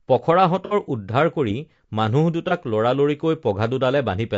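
Low-delay AAC compression runs through the whole speech clip. The voice is rough and grainy, with a hiss sitting between the pitch harmonics and a top band that sounds thinned and synthetic. This is the damage you get when short coding frames cannot resolve the harmonics cleanly and bits run short. The codec is likely AAC-ELD, at a rate that fits roughly 32 kbps.

AAC frame loss with concealment appears first from 0.65 to 0.74 s. About 60 ms of audio went missing, which points to two consecutive lost frames. The decoder patched the gap by reusing and reshaping the last good spectrum, so the sound smears into a noisy, phasey blur instead of dropping out. A second, shorter AAC frame loss with concealment at 2.48 to 2.52 s covers about 30 ms, consistent with a single frame, and gives a brief smeared patch.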